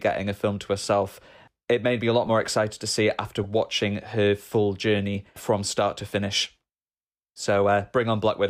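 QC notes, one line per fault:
2.26–2.28 s, corrupt frame decoded: a brief chirp after "made me a lot", as a couple of damaged frames play with misread gains, adding sound where a dropout would leave a gap.
3.44 s, corrupt frame decoded: a short squeak after "to see it after". Flipped bits push energy to wrong frequencies across about two frames, unlike a click's single broadband impulse.
4.51 s, corrupt frame decoded: a single-frame blip just before "journey from start to". Its misplaced energy distinguishes it from the muffled smear of concealment.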